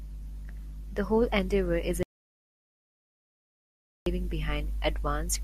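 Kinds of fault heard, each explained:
Audio dropout to silence: the speech cuts off mid-flow right after "whole endeavor is" at 2.03 s and returns at 4.06 s, leaving about two seconds of silence with no room tone. The waveform flattens out, and the spectrogram shows a completely blank band. A briefly lost input or stray mute is the likely cause.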